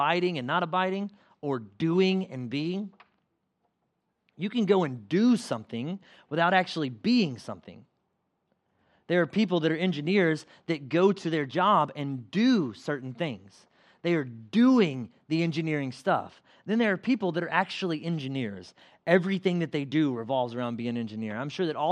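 The recording carries its speech signal with no audible technical faults at any point.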